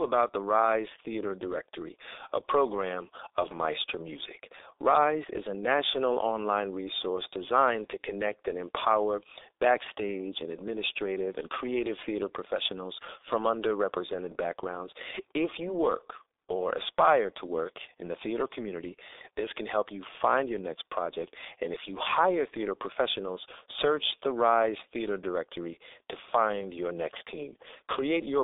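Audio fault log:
Throughout, G.723.1 codec: the speech is muffled and hoarse with smeared consonants, nothing above 3.8 kHz and a telephone band of about 300 Hz to 3.7 kHz. The low 6.3 kbit/s rate and slowly updated voice model, not mere band-limiting, cause the rough, blurred texture.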